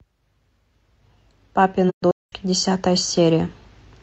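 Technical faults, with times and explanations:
1.89–2.33 s, AAC frame loss with muting: about 340 ms of the speech drops out in gaps scattered over roughly 430 ms, the longest near a fifth of a second, which points to around eight lost frames. The decoder zeroes their spectrum, and overlapping windows fade the sound out and back in at each gap's edges.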